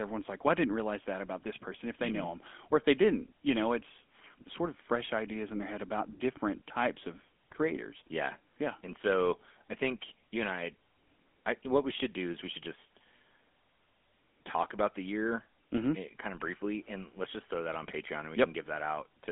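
GSM full-rate codec damage runs throughout the speech. The codec models the vocal tract and drives it with a sparse, regularly spaced pulse excitation, which gives the buzzy, gravelly roughness heard here, consistent with 13 kbps. Nothing passes above 3.6 kHz, within a narrow 250 Hz to 3.4 kHz telephone band.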